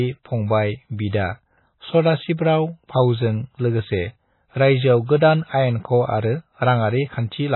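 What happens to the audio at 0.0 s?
From the very first moment, the speech carries heavy MP3 compression artefacts that last the whole clip. Its likely cause is an encoder starved of bits, consistent with a bitrate as low as 16 kbps. The encoder discards everything above 4 kHz and drops weak frequency lines that flicker between frames, giving a watery, swirling tone with smeared onsets. A spectrogram shows a hard ceiling at 4 kHz and patchy, blocky holes below it.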